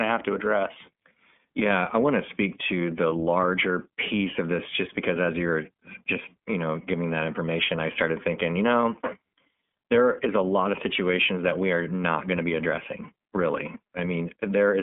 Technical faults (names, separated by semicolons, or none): iLBC codec; dropped samples